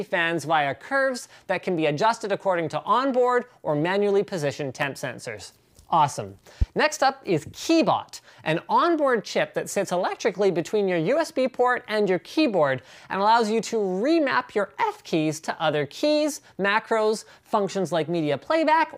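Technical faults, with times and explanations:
4.82 to 4.85 s and 6.62 to 6.65 s, loud pop: each is a single sharp burst about 30 ms long, standing out by about 10 dB and then about 15 dB over the sound, which carries on uninterrupted beneath it. That continuity separates a pop from a dropout or an edit click, where the audio itself breaks. The likely cause is a sudden voltage step or pulse from a plug, switch, static or driver glitch, shaped by the circuitry that follows.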